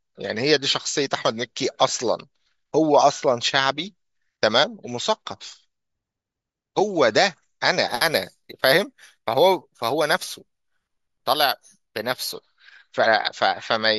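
From about 7.89 s to 12.33 s the speech picks up a bright, metallic fizz riding on top of it, rising and falling with the level of the talking. That's imaging from sample-and-hold upsampling. Each sample was simply repeated to raise the rate, with no smoothing filter, which fits a 16 kHz source pushed up to 48 kHz. Mirrored copies of the spectrum get left behind. The lowest copy sits between 8 kHz and 16 kHz at about 15 dB below the speech, and it moves opposite to the pitch.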